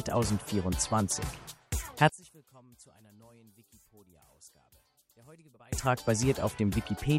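From 2.09 to 5.73 s, one channel is likely inverted, so the mono sum cancels shared content and the level drops about 30 dB to a faint residue.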